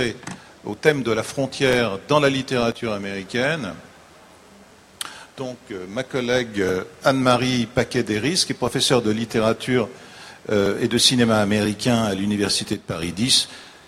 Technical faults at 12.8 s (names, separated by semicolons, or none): one channel drops out